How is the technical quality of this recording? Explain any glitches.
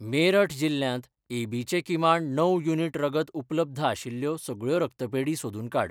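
The recording has no glitches to explain. The speech comes through without dropouts, clicks, distortion or any other technical fault.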